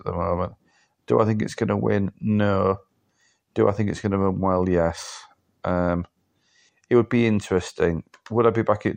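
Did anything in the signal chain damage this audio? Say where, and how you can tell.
No, nothing in the signal chain audibly damaged this speech recording. I can't point to any stage where the sound breaks, jumps or changes character.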